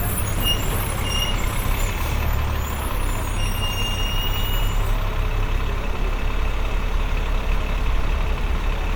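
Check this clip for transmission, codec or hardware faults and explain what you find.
One codec fault runs through the whole clip: generation loss. The sound was most likely passed through MP3 repeatedly, around seven times at something like 128 kbit/s, each pass requantising on a shifted frame grid. Noise and spectral gaps accumulate, leaving a swirly, hollow, smeared texture with blurred attacks and nothing above 19.9 kHz.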